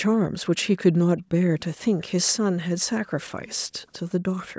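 A display or video cable coupling into the audio path produces video or display buzz from 1.49 s to 4.17 s: a low, steady buzz at the 75 Hz field rate with fine hash above it, sitting well beneath the speech.

Inside that stretch, brief echo leak appears at 1.60–1.64 s and 3.47–3.56 s, most likely because a far-end echo canceller let some loudspeaker pickup through. Each is a faint scrap of the speech returning about 411 ms late, the second slightly stronger than the first.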